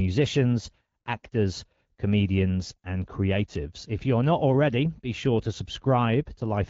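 Nothing in this speech recording stands out as a technical fault; its band-limited, wideband-telephone character fits AMR wideband (HD Voice) coding at around 12.65 kbit/s, at which speech stays clear.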